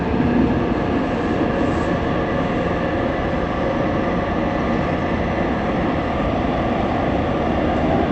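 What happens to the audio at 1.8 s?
Nothing goes wrong at 1.8 s; the sound carries on intact through that moment.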